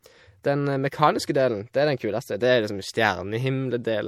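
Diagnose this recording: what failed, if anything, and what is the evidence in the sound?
MP3 compression throughout the speech, at the codec stage: nothing survives above 18 kHz and the codec damage is plainly audible, which fits a bitrate around 64 kbps. The likely cause is an encoder short of bits, cutting the treble and dropping weak spectral lines.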